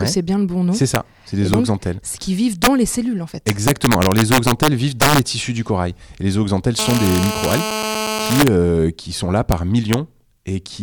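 All through the speech there's integer overflow: loud peaks driven about 5 dB too hot wrap to the opposite sign instead of clipping, so a few rare peaks crack violently. From 6.79 to 8.44 s, between "les zooxanthelles" and "euh qui sont là", a nearby phone on a call injects GSM phone buzz, a steady, raspy 217 Hz rasp about 6 dB under the speech.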